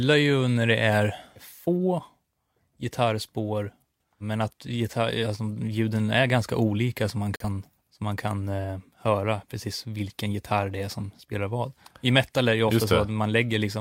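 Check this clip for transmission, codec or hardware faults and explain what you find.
One fault is present: a brief digital broadcast dropout in the speech at 7.36 to 7.45 s. The receiver lost the stream or rejected a corrupted frame and muted until clean data resumed. The sound stops, about 43 ms of programme is missing, which fits a single lost frame, and then it resumes. A spectrogram shows a narrow full-band blank column, and the waveform drops to silence.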